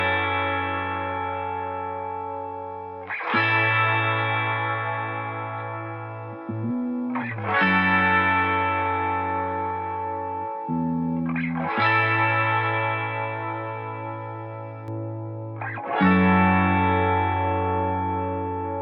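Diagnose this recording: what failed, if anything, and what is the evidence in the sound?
A de-emphasis filter was applied wrongly in the playback stage. From 14.88 s to the end at 18.82 s, the sound turns dull and muffled. The top end falls away smoothly, with no sharp edge. At 10 kHz the level sits about 11 dB below 1 kHz. A treble-cut curve meant to undo pre-emphasis ran on audio that carried none, or ran a second time. The highs were cut with nothing to restore them.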